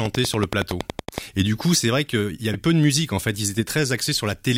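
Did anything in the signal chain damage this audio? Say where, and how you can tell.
Yes. From 0.06 to 1.19 s a train of clicks ticks over the speech at a steady 10.7 per second, around fifteen near-identical pulses peaking about 15 dB above the signal. That even spacing and repeated shape point to an outside pulse source, likely interference in the analogue wiring, rather than codec damage.

At 2.51 s, between "c'est vrai qu'il y" and "peu de musique en", a single 34 ms blip is damaged data in a compressed stream: corrupted bytes made the decoder misread frames and resync. It is one isolated burst, not a periodic series, which places it at the codec or storage stage.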